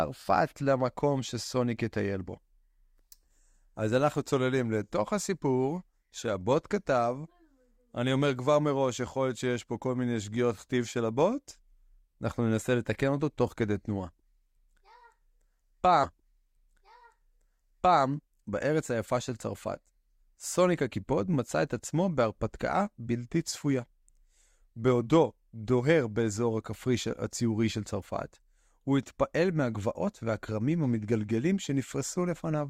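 At 16.03 s the audio jumps back and replays a stretch of speech, a stream segment repeated. The player fetched or queued the same segment a second time, so about 2 s of the programme, up to 18.03 s, is heard twice in a row. There is a small blip at the point where playback jumps back, and the clip runs 2 s longer than the original programme.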